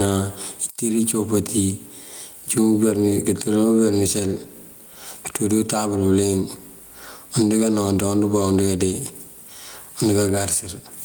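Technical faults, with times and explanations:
Throughout, gain pumping: level ducks about 15 dB under loud speech, likely from fast limiting on excessive gain.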